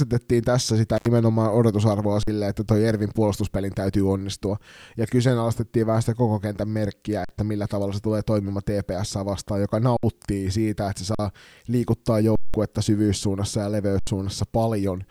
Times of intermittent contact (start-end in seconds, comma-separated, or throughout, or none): 0.97-1.07